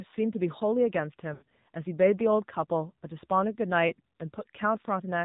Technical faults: AMR narrowband mobile codec; lost AMR speech frames

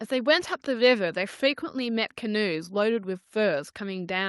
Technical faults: none

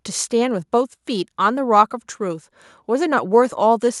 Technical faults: none

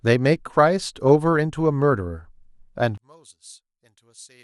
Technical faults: DAB burbling; one channel inverted

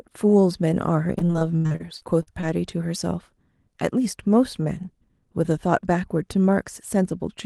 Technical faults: repeated packet loss (robotic sound)

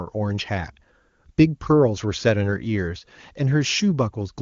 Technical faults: none

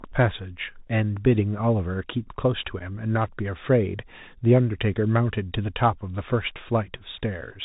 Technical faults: Bluetooth CVSD headset codec; unconcealed Bluetooth headset packet loss

